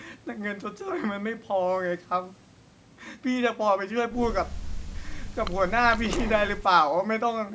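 Nothing technically wrong can be heard in this speech recording, which has passed through a call's normal microphone processing that trims the lowest bass and leaves nothing above 8 kHz.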